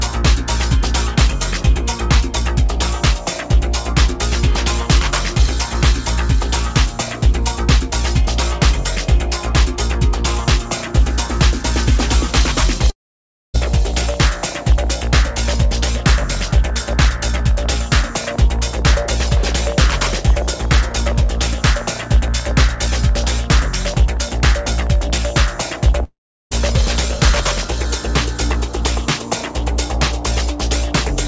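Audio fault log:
12.90–13.56 s and 26.04–26.53 s: long network dropout, likely; about 0.64 s and 0.48 s of sound vanish, bridged by a fading buzz, then near silence before resuming.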